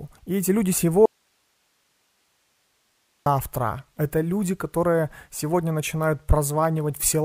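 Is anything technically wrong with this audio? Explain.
Yes, there's one clear problem: an audio dropout to a faint residue from 1.06 s to 3.26 s, right after "эти люди". The speech cuts out abruptly for about 2.2 s, leaving only hiss sitting roughly 45 dB below the normal level, then snaps back mid-flow. It doesn't sound like a natural pause or fade. The likely cause is the wanted signal being lost upstream while the rest of the chain stayed live, so only its noise floor came through.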